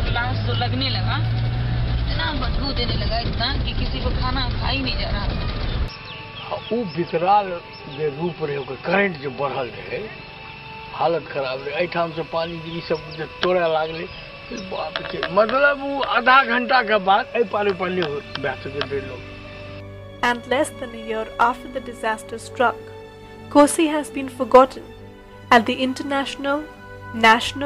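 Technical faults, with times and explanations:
14.57–14.59 s, corrupt frame decoded: a brief blip of misplaced energy, peaking around -35 dBFS. A couple of damaged compressed frames were decoded anyway, scattering energy to wrong frequencies.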